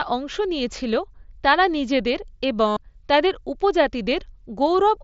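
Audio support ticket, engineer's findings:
Bluetooth headset link dropped voice packets at 2.68–2.77 s, just after "নিয়েছিল তারা নিজেদের এবং": concealed Bluetooth headset packet loss over about 90 ms. Receiver repeated best-matching recent waveform, giving a buzzy held tone at full level, slight warble as real audio resumes. mSBC path audible alongside: wideband band limit, light grain.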